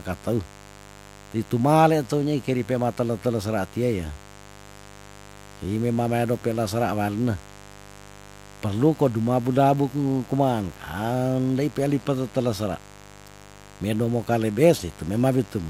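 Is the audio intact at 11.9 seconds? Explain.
No, not quite. At 11.9 seconds there's mains buzz under the speech, and it isn't just that moment: it runs the whole clip. Something like a dimmer, a rectifier or poor shielding is letting sharp switching spikes into the signal twice per 50 Hz cycle, and those spikes spray harmonics well up into the kilohertz range. You hear it as a steady, raspy buzz sitting roughly 25 dB below the speech.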